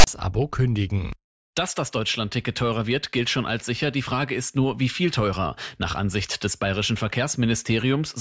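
Right at the start, from 0.00 to 0.07 s, there's a case of file tags played as audio: a metadata block got decoded as samples. The text makes a harsh, lopsided rasp, and the zero padding drops to silence, all with abrupt edges.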